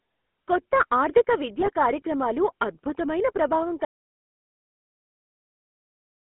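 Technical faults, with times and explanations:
Throughout, GSM full-rate codec: speech is squeezed into a 200 Hz to 3.4 kHz band and rebuilt from sparse pulses, giving a buzzy, gravelly roughness, consistent with 13 kbps coding.
1.60 to 1.69 s, GSM bit errors: corrupted filter, pitch and gain values across the damaged frames twist the spectrum, producing a brief squawk and gargle.
3.85 s to the end, audio dropout to silence: speech cuts off mid-flow into silence with no room tone, likely because the input was lost and silence was written.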